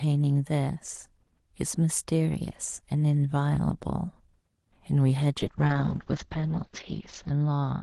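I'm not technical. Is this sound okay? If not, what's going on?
No. From about 5.41 s to the end, there is a call bitrate drop: the call link judged it had less room, so the Opus call codec was told to squeeze the speech into far fewer bits. The speech turns rougher and more muffled, because the crisp upper range is cut from about 12 kHz down to about 6 kHz. It stays at its worst for nearly two seconds and doesn't recover before the clip ends.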